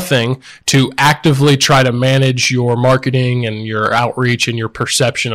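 A speech recording driven about 16 dB past what the chain can pass suffers hard clipping throughout, with peaks sliced flat on a few percent of samples, giving harsh fuzz on louder syllables.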